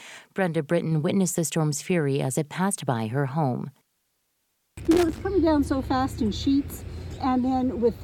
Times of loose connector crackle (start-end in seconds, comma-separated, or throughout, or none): 4.85-5.20